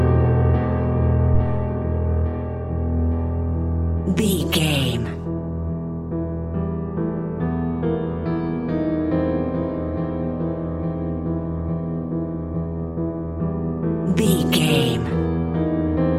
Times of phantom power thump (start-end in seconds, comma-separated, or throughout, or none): 1.34-1.83